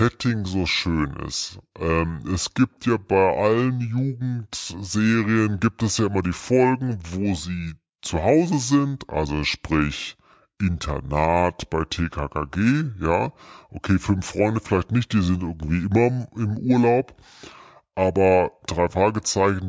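From start to finish, the playback runs at a wrong sample rate. The samples are clocked out slower than they were captured, with no rate conversion in between, which fits audio recorded at 22 kHz being played at 16 kHz. Because speed and pitch are tied together, the speech runs at 0.726 times its natural pace and sits 5.55 semitones lower, so every voice sounds slow, heavy and unnaturally deep.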